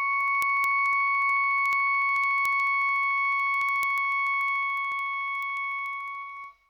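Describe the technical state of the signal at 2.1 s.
At 2.1 s the music sits inside a run of word clock ticks lasting from 0.13 to 6.66 s. The receiving device runs on its own clock, drifting a few hundred parts per million from the sender's, so a single sample slips at each crossing. That produces sharp ticks of uneven strength, roughly fourteen a second.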